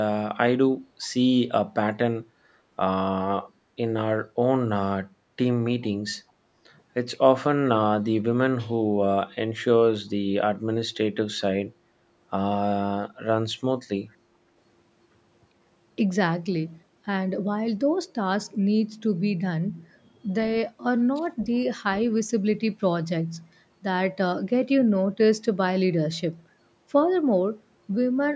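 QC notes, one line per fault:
1.02–1.08 s, 1.67–1.75 s, 5.81–5.89 s, 21.40–21.44 s: echo leak, very faint short scraps of the speech returning 406 ms late, likely residue a loudspeaker-side echo canceller failed to remove.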